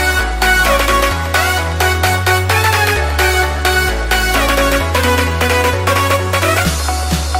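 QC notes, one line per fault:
No faults were heard at any point in the clip.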